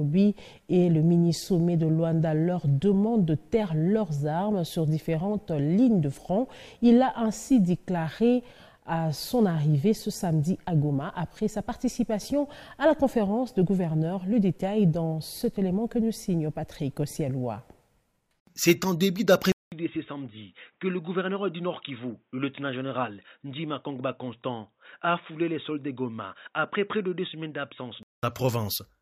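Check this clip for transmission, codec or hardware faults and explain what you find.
One fault turns up. At 19.52 s, after a 200 ms gap, the sound goes dull and boxy until 28.23 s: nothing above 3.8 kHz, about 5 dB quieter, with faint new noise. Likely the input switched to a poorer device with a narrower band.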